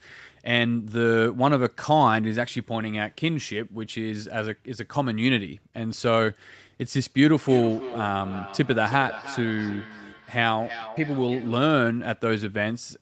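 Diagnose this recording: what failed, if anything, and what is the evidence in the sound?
Call-path feedback echo between two devices: at 7.41–11.7 s, speech recurs roughly three times per second, about 14 dB down, as evenly spaced spectrogram ghosts.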